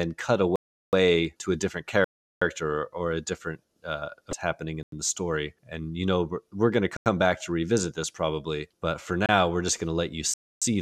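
At 0.56 s the speech drops into a block of digital silence. It lasts about 0.37 s and ends at 0.93 s. The cut is hard at both edges. An identical hole runs from 2.04 to 2.42 s. Both match a 16384-sample block, likely a buffer that was never filled in time. At 4.30 s there is a short stretch of damaged data in a compressed stream, lasting about 34 ms. The decoder misread corrupted frames and lost sync there, then recovered at the next frame header. More blocks of digital silence follow. The gaps from 4.83 to 4.92 s and from 6.97 to 7.06 s are each about 93 ms, which fits a 4096-sample buffer. At 9.26 s a 28 ms dropout comes through as a short hole. The last gap, from 10.34 to 10.62 s, is a hole of about 0.28 s.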